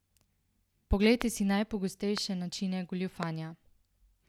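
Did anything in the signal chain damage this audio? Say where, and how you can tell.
Yes. Loud pops at 1.22, 2.18 and 3.23 s, single sharp transients about 15 to 20 dB above the continuing speech, likely voltage spikes entering the analogue wiring.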